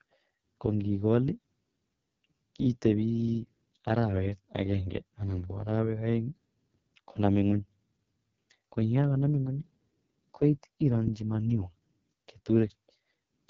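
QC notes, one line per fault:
Throughout: AMR wideband (HD Voice) codec damage, heavy; speech sounds rough and raspy, consistent with about 6.6 kbit/s, nothing above 7.2 kHz, noise-filled top band.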